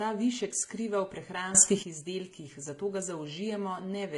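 Throughout this speech recording, the sound carries a mix of codec artefacts heard together, with nothing above 11.3 kHz. That combination of artefacts likely comes from transcoding between lossy codecs: a low-rate encode such as HE-AAC at around 20 kbit/s, then MP3 at roughly 51 kbit/s, each adding its own damage. From 1.55 s, right after "ta višek skriva v", speech and background hiss leap up together by about 12 dB and drop back at 1.83 s, before "izdelkih zato ga". This sudden gain jump is likely a digital gain change applied without any ramp.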